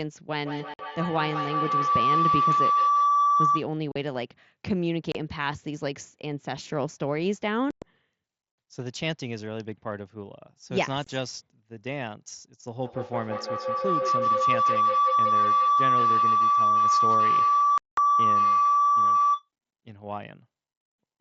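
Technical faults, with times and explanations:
0.38 to 3.71 s and 12.82 to 19.49 s, feedback howl: two devices in the same room are sharing the call, so the mic-to-speaker loop keeps adding gain each trip round. It narrows to a tone near 1 kHz, pulses roughly every 150 ms and peaks about 6 dB above the speech.
0.74, 3.92, 5.12, 7.71, 11.04 and 17.78 s, unconcealed Bluetooth headset packet loss: runs of tiny headset packets went missing and nothing was patched in, so the speech has abrupt holes from 22.5 ms to 195 ms. The 7.71 s and 17.78 s gaps are longest.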